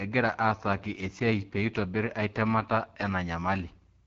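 Throughout, AMR wideband (HD Voice) codec damage makes the speech rough and raspy, which fits the low 8.85 kbit/s mode; spectrograms show a hard ceiling near 7.1 kHz.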